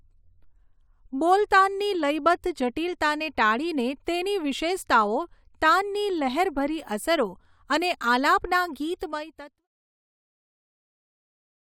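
No faults heard in this speech; the only level change is a smooth editor's fade-out from roughly 8.5 s to 9.68 s.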